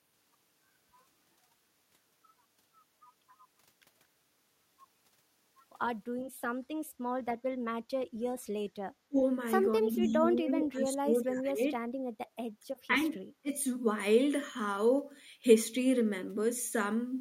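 At 6.15 to 6.28 s, and again at 6.88 to 6.99 s, the background is gated by the echo canceller. While the far end's loudspeaker plays, the canceller pulls the microphone down, by about 19 dB and then about 10 dB. The waveform shows brief notches in the noise floor, and the spectrogram shows short pale gaps across all bands.

The talker then drops sharply at 9.08 to 9.18 s, by around 30 dB, and sags through most of 9.81 to 11.81 s by around 15 dB. Shorter dips follow at 12.88 to 13.03 s (shallow, around 10 dB) and 13.42 to 13.51 s (near 25 dB). This is likely speech suppressed in double talk: with both sides talking at once, the canceller turns everything down. The envelope shows holes and a flattened stretch.

Inside that long dip, at 10.08 to 10.12 s and 10.47 to 10.52 s, faint scraps of speech arrive 248 ms late, roughly 30 dB below the talker. The likely cause is echo leak from a loudspeaker end whose canceller missed part of what its microphone picked up. 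On the spectrogram they appear as faint, brief repeats of the earlier harmonic pattern.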